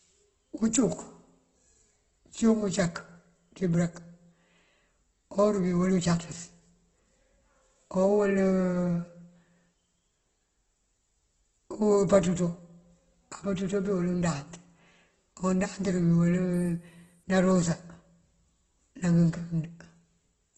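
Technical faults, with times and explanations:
Throughout, Opus compression: heavily grainy, rough speech with nothing above 12 kHz, likely from a low-bitrate encoder filling starved bands with folded copies and noise.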